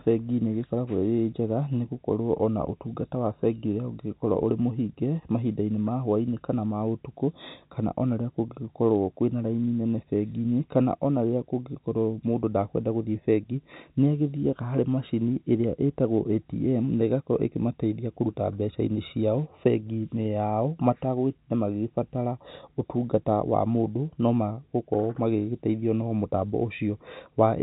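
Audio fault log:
No faults detected.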